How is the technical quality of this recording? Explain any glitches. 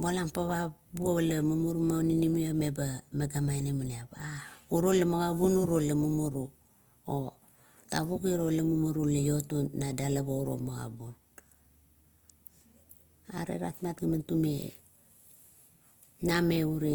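The technical quality is compromised by plainly audible Opus compression running through the whole speech clip. Throughout, the sound is rough and grainy. The likely cause is Opus encoding in its music mode, at a rate that fits about 24 kbps. Starved bands get filled with folded or noisy content, so tones turn coarse. Bandwidth stays full, reaching about 20.2 kHz.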